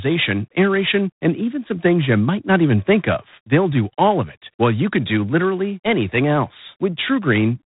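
G.726 ADPCM coding runs through the whole speech clip, at 24 kbit/s. Coarse difference coding adds a harsh, rasping hiss tracking speech level. Nothing passes above 3.8 kHz.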